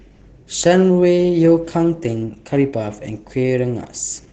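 From start to finish the speech carries Opus voice compression artefacts, the SILK speech coder at a low rate, sounding like roughly 12 kbps. Everything above 8 kHz is gone, so it's muffled, and the coarse excitation coding leaves it hoarse and slightly robotic.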